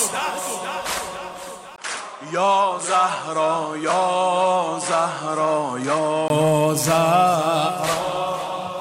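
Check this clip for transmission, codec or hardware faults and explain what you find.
One fault appears. From 1.76 to 6.30 s the input likely switched to a poorer device with a narrower band. After a 20 ms gap, nothing above 10.7 kHz gets through, so the sound turns duller at the same level, with faint new background noise.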